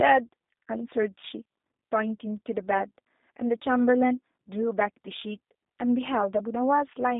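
G.729 codec damage runs throughout this speech clip: the rough, slightly synthetic tone and nothing above 3.8 kHz fit an 8 kbit/s model-based coder rebuilding speech within a 250 Hz to 3.7 kHz line band.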